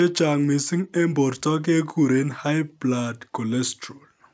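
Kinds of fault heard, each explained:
No faults are present; the speech carries the ordinary marks of call microphone processing, with the lowest bass trimmed and nothing above 8 kHz.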